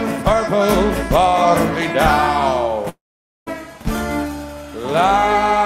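At 2.89 s the sound breaks off and does not resume until 3.49 s, a long network dropout. The receiver briefly stretches the last sound into a fading buzz, then leaves about 490 ms of silence. Some 580 ms of audio was likely lost in transit and never played. On the waveform the envelope shrinks to a flat line. A spectrogram shows a smeared, decaying tail giving way to an empty band before the content abruptly returns.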